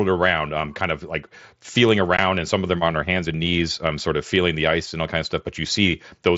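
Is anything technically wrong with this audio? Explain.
Yes. There is one brief dropout from unconcealed Bluetooth headset packet loss at 2.17 s, right after "kind of like feeling" and just before "and some of them." Voice packets between headset and phone never arrived, and nothing was done to hide the gap. Silence or an idle pattern replaced them. The hole lasts about 15 ms, which fits two lost frames. Its edges are abrupt, so it comes across as a short, sharp-edged hole in the speech. The wideband mSBC link carries the speech up to 8 kHz.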